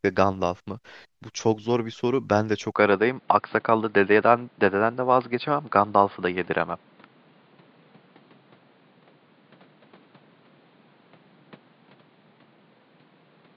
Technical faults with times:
2.76-13.56 input switched to a poorer device

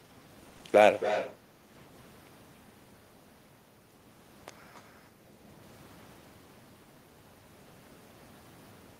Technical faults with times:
0.49-0.65 repeated packet loss (robotic sound)
0.96-1.35 echo leak
4.74-4.82 echo leak

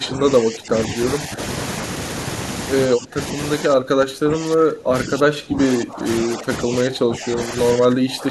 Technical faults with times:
0.00-1.39 speech suppressed in double talk
2.87-3.19 speech suppressed in double talk
3.58-8.31 speech suppressed in double talk

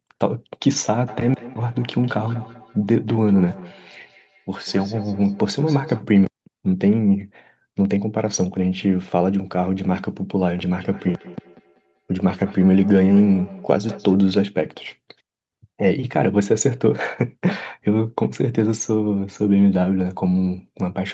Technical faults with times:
1.07-6.05 feedback echo between two devices
10.75-14.20 feedback echo between two devices

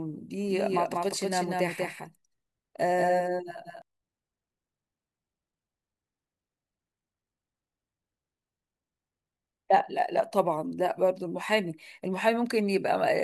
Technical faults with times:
0.48-3.82 doubled audio track

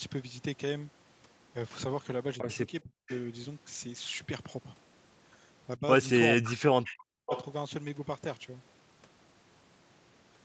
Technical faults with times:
2.41-3.09 speech suppressed in double talk
3.09-3.18 echo leak
5.78-5.83 speech suppressed in double talk
6.37-7.31 speech suppressed in double talk
6.44-6.53 echo leak
6.87-6.92 echo leak
7.26-7.45 echo leak

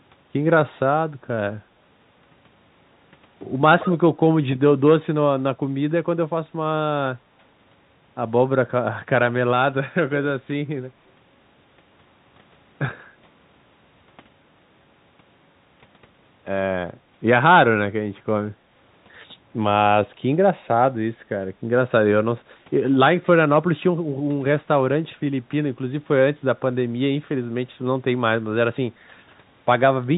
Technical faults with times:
3.79-3.98 echo leak

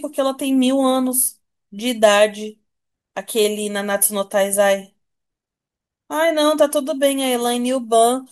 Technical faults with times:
none

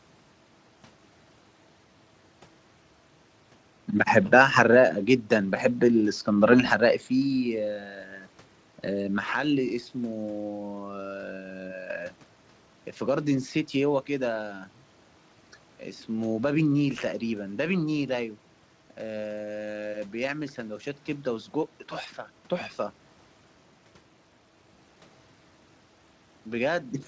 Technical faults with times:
none

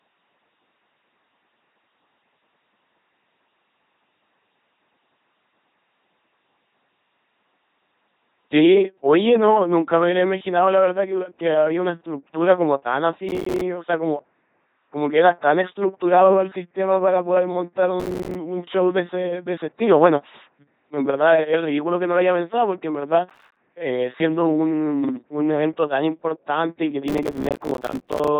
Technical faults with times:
0.00-28.40 LPC-10 vocoder
13.29-13.61 processor overload crackle
18.00-18.35 processor overload crackle
23.30-23.57 processor overload crackle
27.08-28.28 processor overload crackle

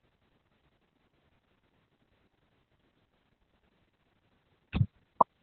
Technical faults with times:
0.00-5.43 Opus voice compression

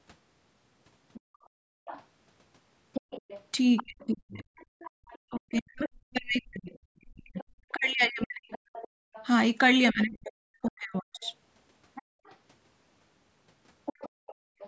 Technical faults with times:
1.13-14.67 other side's voice leaking through
1.20-5.01 background gated by the echo canceller
3.82-11.25 speech suppressed in double talk
8.88-14.59 background gated by the echo canceller

